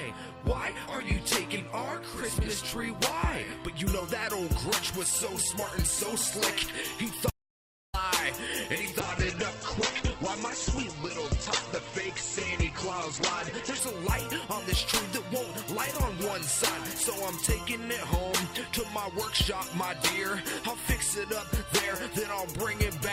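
At 7.30 s the sound cuts out abruptly and returns at 7.94 s, leaving about 0.63 s of silence. This is an audio dropout to silence, most likely a lost input while silence kept being written. Unlike a fade or a muted-but-live line, no room tone survives the gap.

From 9.0 to 13.87 s a call bitrate drop sets in. The encoder's rate falls from 96 to 9 kbps, and the audio band shrinks from 20 kHz to 8 kHz, staying at its lowest for about 4.8 s. The sound turns coarse, watery and dull, clearer again once the rate recovers. Unlike a plain low-pass filter, the roughness comes from coarser coding, not just missing treble.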